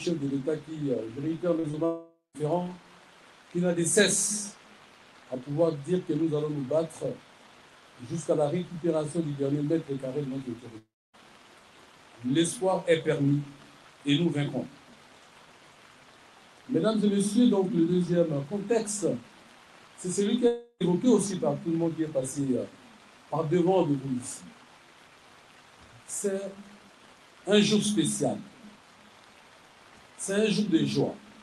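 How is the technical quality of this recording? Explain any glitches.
The recording has network glitches: two tiny packet-loss blips and three longer gaps, all through a call path whose top end stops near 12 kHz, as you'd expect from Opus.

Short concealed packet loss at 1.59–1.65 s and 1.71–1.75 s: about 40 ms, then 20 ms, went missing. The decoder extended the previous sound, so you hear a quick smear or wobble.

Long network dropouts at 1.85–2.36 s, 10.78–11.15 s and 20.47–20.82 s, likely from the network stalling: each has a fading buzz or hiss, then silence (about 160 ms, 270 ms and 60 ms), and the sound resumes with that stretch lost.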